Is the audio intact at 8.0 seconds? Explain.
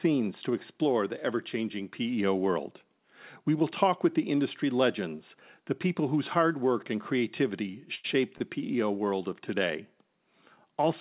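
No. A short stall from a late packet runs from 7.95 to 8.06 s. A packet arrived late and the jitter buffer ran dry. The receiver stretched the last sound for about 88 ms until the packet came. Playback then resumed from the same point. Nothing is lost, but that sound is held too long, with a slight buzz or dip. Everything after it plays 88 ms later. The call codec's 4 kHz band limit is heard throughout.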